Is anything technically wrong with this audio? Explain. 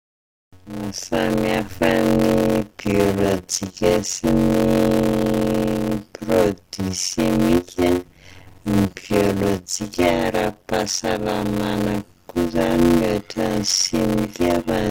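Yes, there is a block size mismatch (padded) running through the whole speech clip. One stage hands over blocks shorter than the next stage expects, and the missing part of each block is filled with silence, consistent with 256-sample writes into larger reads. The resulting regular gaps produce a buzz at about 91.9 Hz, and the speech plays at 0.533 times its normal speed while keeping its natural timbre.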